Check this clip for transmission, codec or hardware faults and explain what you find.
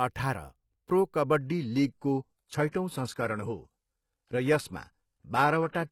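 One fault is present: an adaptive stream dropping to a lower bitrate. It begins at 1.41 s, just after "अठाह्र प्रो", and lasts to the end of the speech clip. The stream player switched to a cheaper version when the connection slowed. The change is abrupt, with no gap. Nothing remains above 12.3 kHz, and codec artefacts rise. That fits a move from roughly 96 kbit/s AAC to roughly 16 kbit/s HE-AAC.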